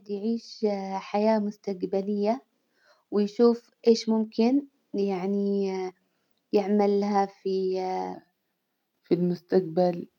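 From 8.14 s to 10.18 s, a section at the wrong speed: the playback clock likely ran slow, at 0.884 times the recorded rate. The speech in this stretch drops about two semitones in pitch and sounds slower and deeper.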